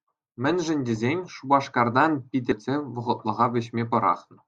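At 2.52 s the speech is broken by a brief glitch, the sign of damaged data in a compressed stream. A corrupted stretch of the encoded file made the decoder misread a frame and lose sync, causing a brief disruption before it locked onto the next valid frame.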